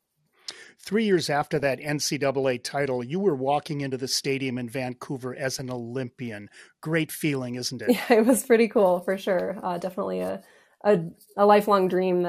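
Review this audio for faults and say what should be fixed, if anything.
The speech is dull and granular throughout, with upper bands dropping in and out and a gurgling edge. This is likely MP2 compression starving its sub-bands of bits, consistent with a rate around 80 kbps. Prevent it by sourcing at a higher bitrate.

DAB burbling appears at 1.42–1.63 s, 5.55–5.59 s and 8.29–8.39 s as brief blips of noise. Residual bit errors after error correction corrupt sub-band samples and scale factors, so individual bands jump in level for up to a frame. Prevent it by improving reception or antenna placement.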